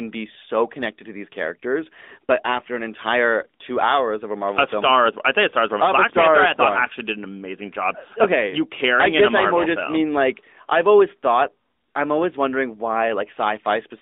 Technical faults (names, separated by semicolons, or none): AMR narrowband mobile codec